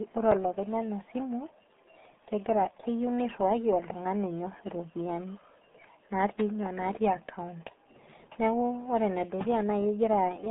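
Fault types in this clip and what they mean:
RealAudio 14.4 codec: a very low-rate dial-up speech coder, and the heavy, gargly smearing here fits its 8 kbit/s budget. The speech sits in a narrow band of about 200 Hz to 3.6 kHz, with nothing above 3.8 kHz, so it sounds muffled throughout.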